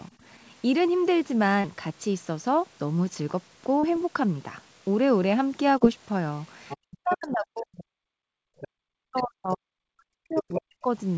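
A speech recording from a call, with three kinds of fault. The other side's voice leaks through, likely residual echo the canceller missed, at 0.13–0.5 s (very faint), 6.69–7.18 s, 7.78–7.84 s, 8.60–8.68 s, 9.17–9.23 s and 10.32–10.62 s (almost as loud as the talker). On a spectrogram these appear as separate harmonic traces. Short concealed packet loss at 1.61–1.67 s, 3.80–3.86 s and 5.78–5.84 s fills roughly 30 ms gaps with extrapolated sound, showing as brief smeared, blurred patches. Speech suppressed in double talk, likely where the canceller turned the talker down while both spoke at once, cuts the talker's level steeply, by as much as about 40 dB, across 6.94–8.47 s and 8.88–10.89 s. These appear as hollow dips in the waveform envelope.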